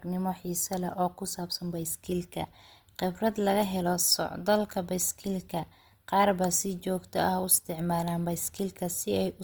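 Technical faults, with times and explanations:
Throughout: Opus compression. The speech sounds grainy, rough and noisy rather than swirly. This is likely a music-mode Opus encode, near 24 kbps, filling starved bands with noise.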